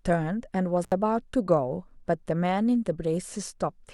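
A short speech recording with an intermittent contact fault: at 0.83 s the signal crackles and drops out for about 71 ms, returning at 0.92 s. That's a loose cable or plug briefly opening the line, leaving just faint hiss until contact is restored.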